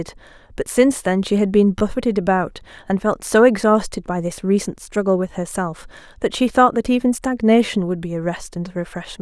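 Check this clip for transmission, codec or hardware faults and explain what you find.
Two brief playback faults are present, both repeated buffers. At 1.79 to 1.81 s and again at 7.66 to 7.68 s, fresh audio reached the output late, so the device replayed its last short block twice more. Each event is a rapid stutter heard as a click or buzz, consistent with roughly 10 ms blocks, with nothing apparently lost from the speech.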